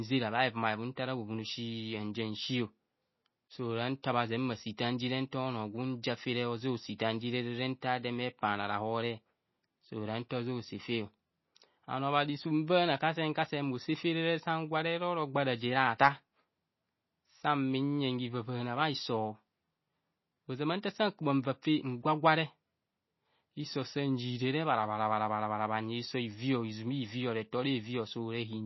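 A speech recording with plainly audible low-bitrate coding damage throughout: nothing survives above 5.8 kHz, and the sound has a watery, swirling quality. This is likely MP3 compression at a very low rate, around 24 kbps. On a spectrogram it shows as a hard ceiling with flickering, patchy energy below it. At 6.98 s there is pre-echo: a hiss about 15 ms long runs just ahead of a sharp attack, blurring its onset. In the waveform it appears as a low noise smear before the transient, and on a spectrogram as a thin broadband haze right before the attack.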